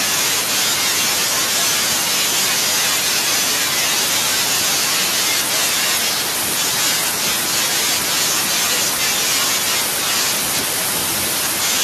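No technical faults can be heard in this speech recording. There are no events to place in time, so there is nothing to list.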